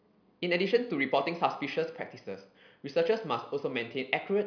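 A short bit of speech, and there's nothing technically wrong to point to anywhere in it.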